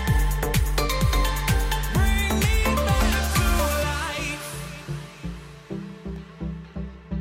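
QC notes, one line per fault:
5.77–6.74 s, CD scratch ticks: six small, evenly spaced ticks, about six per second, each a tiny click or dropout lasting a couple of milliseconds at most. A scratch or blemish on the disc passes under the laser once per revolution. Each pass damages more data than error correction can restore, so the player conceals the gap by interpolating or muting those samples. That leaves a brief, regular tick at the rotation rate.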